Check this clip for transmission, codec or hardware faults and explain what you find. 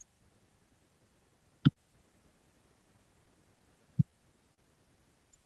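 Three related timing faults appear in this speech clip, all tied to the sender's clock running slow. They arrive over a call path whose sound, with high frequencies cut off above 12 kHz, points to Opus at around 40 kbps.

Clock drift between sender and receiver runs through the whole clip. The sender's clock runs roughly three percent slow, so the receiver's jitter buffer keeps draining. Unlike random network jitter, the resulting hiccups all lean one way: the receiver keeps stretching audio rather than dropping it.

Repeated timing corrections run from 1.29 to 4.12 s. The receiver plays at 99% speed, adding about 50 ms in total to keep pace with the slow sender. This sounds like a faintly dragging, uneven tempo, not a discrete glitch, and no sound goes missing, unlike packet loss.

Short stalls from late packets occur at 1.73 to 1.79 s and at 4.54 to 4.61 s. In each, the buffer ran empty and the receiver held the last sound for 38 ms until the packet arrived, then resumed exactly where it left off. 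A held sound with a slight buzz or dip and nothing skipped distinguishes these from a dropout.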